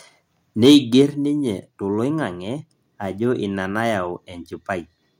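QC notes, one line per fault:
0.63–1.02 s, microphone overload: speech peaks run about 4 dB past the converter's limit, with a small share of samples flattened, giving a harsh crackle, likely from excessive input gain.
1.02 s, microphone volume stepped down: voice and background drop abruptly by about 4 dB right after the distorted peaks, likely the call software cutting input gain in one step.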